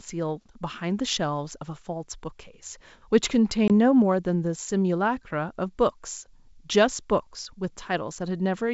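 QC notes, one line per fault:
3.68–3.71 s, packet loss on an ADPCM call: about 20 ms of sound goes to silence; the decoder's adaptive predictor and step size lose track, so speech resumes slightly distorted.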